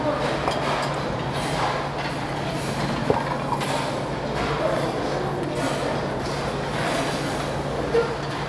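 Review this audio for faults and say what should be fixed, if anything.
Nothing to fix; no audible faults anywhere in the recording.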